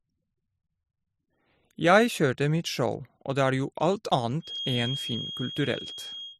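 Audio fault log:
1.64 s and 4.12 s, audio missing between chunks: two quick skips where a sliver of around 20 ms drops out and the edges butt together with no gap. They land about 2.5 s apart, so this is likely a recorder losing a piece at each 2.5 s chunk handover.
4.39 to 6.39 s, feedback whistle: a thin, steady tone at 3.3 kHz sits about 10 dB under the sound, swelling and fading slowly in level. That's likely a loudspeaker-to-mic loop hovering right at the edge of feedback, ringing at one frequency without running away.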